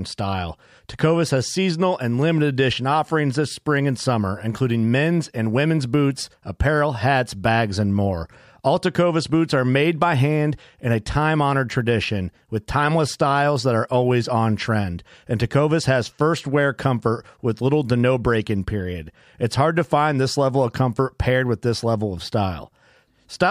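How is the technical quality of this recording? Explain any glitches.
No glitches or technical faults are audible anywhere in the recording.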